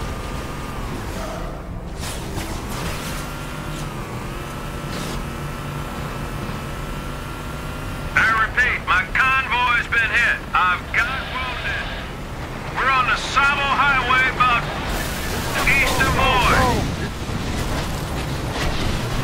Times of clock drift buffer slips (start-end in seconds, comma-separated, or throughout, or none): 0.57-18.78